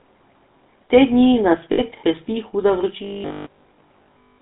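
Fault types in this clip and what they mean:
GSM full-rate codec: Throughout the clip the speech carries the buzzy, gravelly texture of the original GSM coder, which rebuilds the voice from a vocal-tract filter excited by a sparse, regularly spaced pulse train. The damage is plainly audible here. The line band runs from 200 Hz to 3.7 kHz, so there is no low bass and nothing of the upper sibilance, and the 13 kbps rate leaves little room to carry fine detail.
lost GSM frames: When frames fail, the decoder keeps reusing the last good frame's parameters, so the gap sounds like a short rough, metallic ring instead of silence. Here it happens twice. The first loss runs from 1.72 to 1.81 s, right after "dni nas", and bridges about 60 ms. The second, at 3.22 to 3.25 s, covers about 20 ms and falls within the buzzy stretch that starts at 3.04 s.
robotic sound from repeated short buffers: From 3.04 s to the end at 4.40 s the speech turns into a rigid, metallic drone that still roughly tracks the syllables. 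A fixed 50 Hz buzz runs through it, which fits a 20 ms stretch of audio being looped when fresh data fails to arrive in time. Most of the segment, roughly two thirds or more, is repeated material and not new sound. Late buffer delivery is the likely cause.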